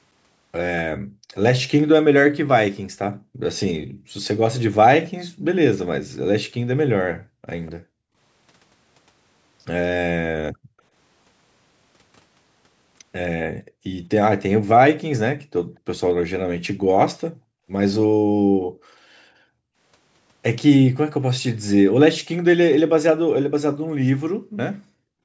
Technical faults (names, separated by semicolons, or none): background gated by the echo canceller; echo leak